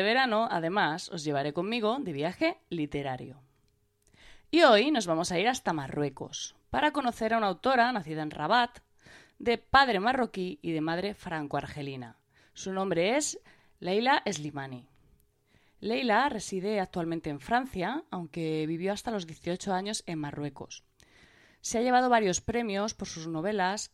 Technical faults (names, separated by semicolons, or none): none